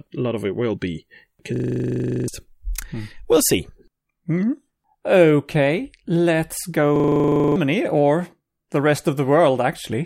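A system hang loop hits at 1.56–2.28 s, after "of it will be", and at 6.96–7.56 s, before "or the". A frozen system replays one 40 ms buffer, giving a 25 Hz buzz.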